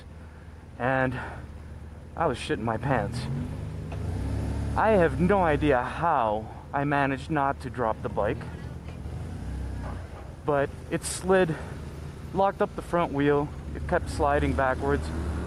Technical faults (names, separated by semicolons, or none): gain pumping